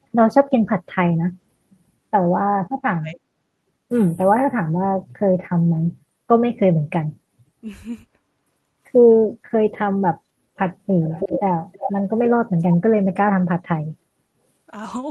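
From 2.59 to 3.21 s the speech sinks sharply, by around 40 dB at its deepest. It drops out in pieces adding up to about half a second. This is speech suppressed in double talk. The likely cause is both sides talking at once. The echo canceller cannot tell this talker from loudspeaker echo. It treats the near voice as echo and turns it down, so the voice gaps and fades.

At 11.03 to 11.4 s, and again at 11.72 to 11.92 s, a delayed copy of the voice is heard. It trails the original by 324 ms. It sits only a few dB below the main speech. This is echo leak. The likely cause is a far end on loudspeaker whose echo canceller failed to remove its own microphone pickup. The leftover sound was sent back as short, separate scraps of echo.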